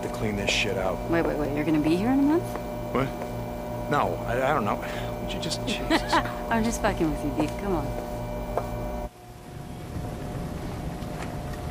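At 6.21 s the audio jumps forward by a short slice, about one compressed frame or roughly 30 ms, a case of compressed frames skipped. A frame went missing or was rejected by the decoder, so playback resumes from the next one. Each frame is 26.1 ms long. The audio jumps straight across the join, and no silent gap is heard, which sets it apart from a plain dropout.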